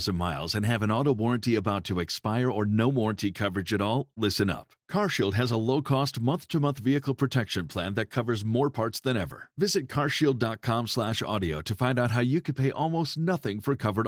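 Nothing's amiss in this bit of speech: it comes through Opus voice compression with just the light coding texture you'd expect, and there's no technical fault to point to anywhere in it.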